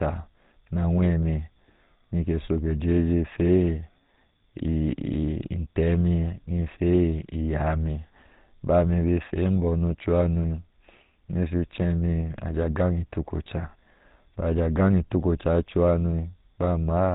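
From start to end, the speech carries GSM full-rate codec damage: a plainly audible buzzy, gravelly roughness from coarse pulse excitation of a vocal-tract model, consistent with a 13 kbps stream. A spectrogram shows nothing above 3.8 kHz and smeared, comb-like harmonic structure.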